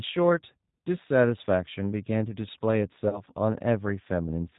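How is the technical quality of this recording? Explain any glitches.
Quality is limited by a low-bitrate telephone codec throughout, plus one brief dropout near the end.

G.729 codec: The speech passes through G.729A at 8 kbit/s, which does not store the waveform. It sends a vocal tract filter, a pitch predictor and a few pulses per 10 ms frame, and the decoder rebuilds speech from those. Nothing above 4 kHz survives, so the sound is narrowband and muffled, and the codec damage is plainly audible as a rough, slightly synthetic texture.

VoIP packet loss concealed by the speech codec: From about 3.09 to 3.23 s, 40 ms of audio went missing, which fits two lost packets. The decoder filled the gap by repeating its last pitch and filter settings at falling gain. The result is a short stretched, buzzy or noisy sound that fades instead of a silent hole. Because each frame builds on the previous one, the voice stays weakened and distorted for a while after the audio resumes, so the disturbance runs to 3.23 s.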